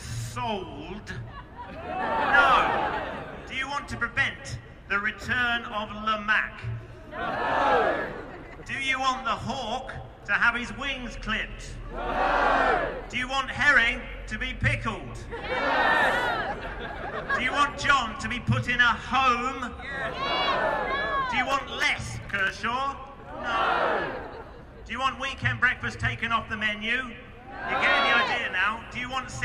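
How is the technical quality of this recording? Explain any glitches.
One glitch stands out: processor overload crackle from 21.46 to 22.50 s. During that second the system couldn't finish its short audio buffers in time, apparently around 3 ms each, and a few dozen deadlines were missed. Each miss left a tiny silent hole with hard edges, so the sound is torn by a rapid crackling grit. A single dropout would give one clean gap; here many brief gaps cluster and stop together when the load eases.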